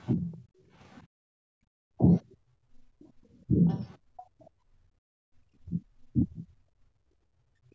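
Other side's voice leaking through, 0.0 to 1.0 s: a very faint second voice, roughly 40 dB under the talker, sits underneath, likely loudspeaker echo the canceller failed to fully remove.

Speech suppressed in double talk, 0.16 to 0.39 s: the talker's voice dips by around 15 dB for a moment, likely because the canceller mistook simultaneous talking for echo and turned everything down.

Background gated by the echo canceller, 0.67 to 5.31 s: the room sound drops away, by about 36 dB at its deepest and for roughly 3 s in total, as the canceller clamps the microphone while the loudspeaker plays.

Speech suppressed in double talk, 1.95 to 2.06 s: the voice briefly cuts almost to nothing, a drop of around 40 dB, likely the same double-talk confusion.

Speech suppressed in double talk, 3.47 to 3.68 s: a shallower dip of around 20 dB, likely the same cause.

Other side's voice leaking through, 3.7 to 4.44 s: the second voice returns, louder this time at roughly 30 dB below the talker, likely more residual echo.

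Speech suppressed in double talk, 5.59 to 6.51 s: the talker fades in and out by around 30 dB over about half a second in total, likely another bout of double-talk suppression.

Background gated by the echo canceller, 6.79 s to the end: the ambience drops again, by about 24 dB and for roughly a second, through to the end of the clip.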